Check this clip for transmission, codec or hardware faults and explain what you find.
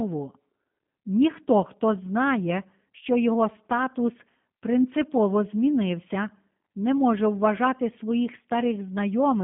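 One fault runs through the whole clip: G.729 codec coding. Throughout, speech is confined to roughly 150 Hz to 3.6 kHz, nothing above 3.7 kHz, and sounds rough and synthetic, which fits an 8 kbit/s pulse-based vocal model rather than simple telephone filtering.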